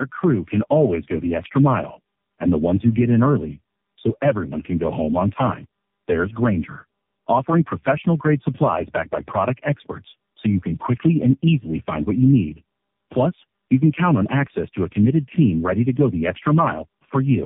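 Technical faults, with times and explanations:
Throughout, tandem speech coding: the call passed through three low-rate speech codecs in a row, decoded and re-encoded at each link, with the roughness and character fitting a G.729A stage followed by two AMR-NB stages, linked by G.711 hops. Each coder re-models speech that the previous one had already degraded, so errors pile up. The speech sounds rough, muffled and warbly, with nothing above 3.7 kHz.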